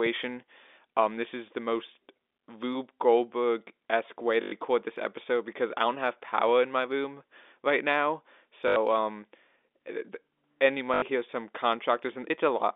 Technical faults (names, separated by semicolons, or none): packet loss with last packet repeated